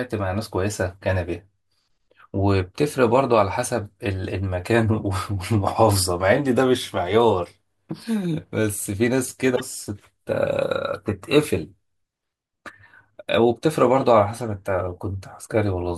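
At 9.52 to 9.61 s, damaged data in the compressed stream throws the decoder out of sync: a brief glitch as it searches for the next frame header.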